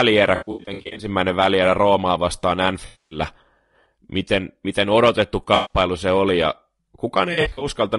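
Throughout, the speech sounds rough and grainy with a dulled top band, likely low-delay AAC compression (AAC-ELD) at a rate consistent with 32 kbps. AAC frame loss with concealment leaves smeared, noisy patches at 0.35–1.07 s, 2.86–3.19 s, 5.55–5.77 s between "miten miten odotettu" and "se oli ja", and 7.33–7.67 s.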